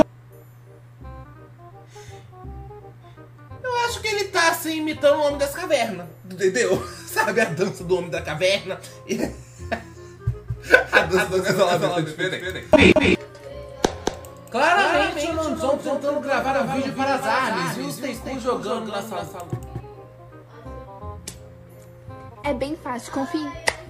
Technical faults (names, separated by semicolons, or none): doubled audio track